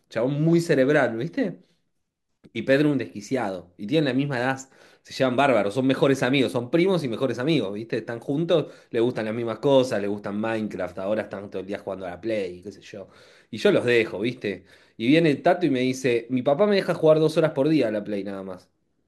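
Nothing technical goes wrong anywhere in this speech recording, so there's no fault to point to at any moment.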